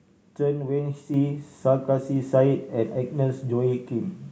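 At 1.14 s the speech and the background noise behind it jump up together by about 5 dB in a single step, and they stay at the new level. This is a microphone volume step up: the call software judged the input too quiet and raised the device's gain all at once.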